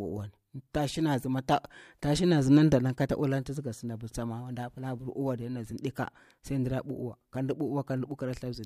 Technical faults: none

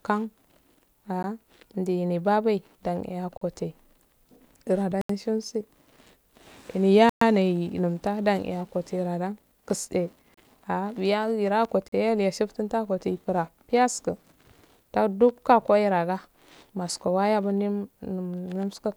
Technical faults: block of digital silence

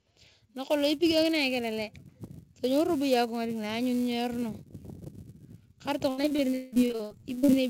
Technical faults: filter restarted on every block; repeated packet loss (robotic sound)

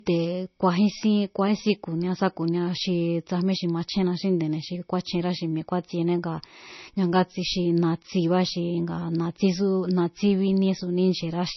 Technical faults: low-bitrate audio saved at a high bitrate

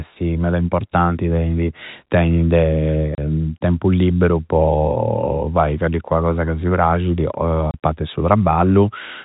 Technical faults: packet loss filled with silence

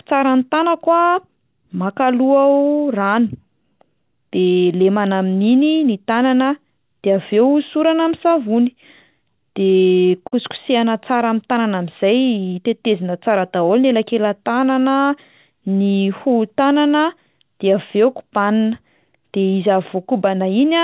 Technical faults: short stall from a late packet

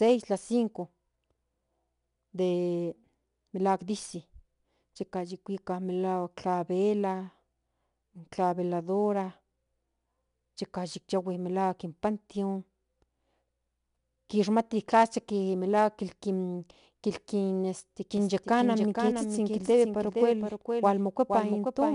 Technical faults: 4-bit ADPCM compression; doubled audio track

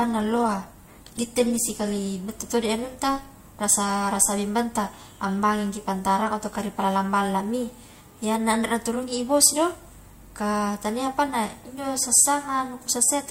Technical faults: adaptive stream starting at a low bitrate

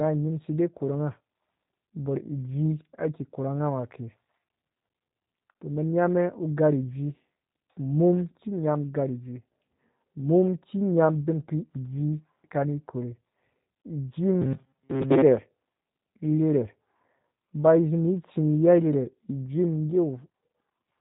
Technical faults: G.729 codec; robotic sound from repeated short buffers

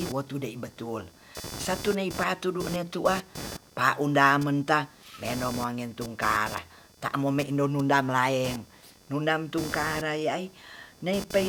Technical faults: computer activity noise

